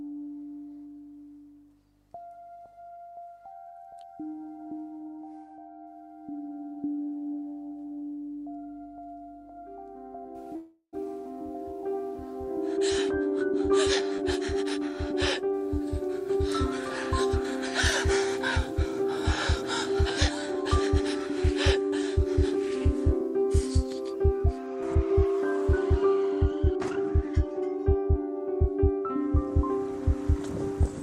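Call audio freeze at 10.55 to 10.95 s: the sound stalls, its last moment drawn out as a fading buzz for about 0.37 s that ends in roughly 90 ms of silence before resuming where it stopped, likely because packets were held up and the jitter buffer ran dry. Jitter buffer speed-up at 14.04 to 14.40 s and 15.79 to 16.48 s (both 9% fast), 18.89 to 20.88 s (2% fast) and 22.36 to 24.41 s (6% fast): the receiver trims tiny pitch-period slices to shed excess delay, removing a few tens of milliseconds in each of the first three runs and about 150 ms in the last, so the audio hurries at unchanged pitch. Skip ahead at 14.17 to 14.20 s, inside the first speed-up: around 70 ms of audio is dropped and playback jumps forward, with the two sides joined almost directly.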